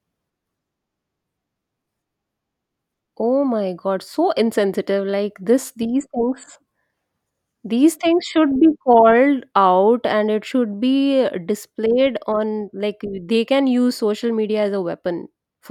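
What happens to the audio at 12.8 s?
Nothing goes wrong at 12.8 s: the speech carries straight through that moment without any dropout, click, glitch or other audible fault.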